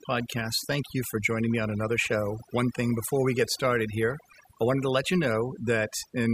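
Overdone noise removal runs throughout: bands near the noise estimate are cut, leaving twinkling specks in near-silent background.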